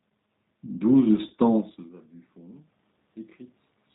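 Speech, coded with the G.729 codec throughout. The sound is band-limited, with nothing above 4 kHz. The voice is intelligible but rough and slightly synthetic. That fits a low-rate codec near 8 kbit/s, likely the G.729A variant. It rebuilds each 10 ms frame from a vocal tract filter, a pitch predictor and a few pulses, so fine detail is lost. The room noise behind the voice warbles for the same reason. From 1.28 to 1.32 s there is VoIP packet loss concealed by the speech codec. The gap is about 20 ms, which fits a single lost packet. The decoder stretches its last pitch and filter into a short sound that fades. Because each frame builds on the one before, the voice stays weak or distorted until 1.32 s. Soon after, at about 1.5 s, the level changes as the talker moves relative to the microphone.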